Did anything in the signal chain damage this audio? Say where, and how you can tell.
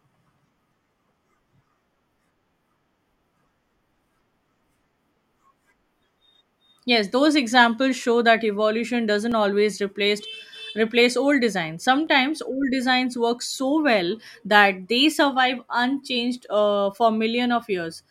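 Yes. Three dropped samples appear as single sharp clicks at 8.02 s (after "those examples"), 9.32 s (after "that evolution doesn't") and 12.07 s (after "replace replace old designs"). Each shows as a thin vertical line across the spectrum. At each point the waveform jumps straight to a later value, losing about 0.7 ms, too little to remove any sound. The stage is likely the driver or buffer, where a short stretch of samples failed to arrive.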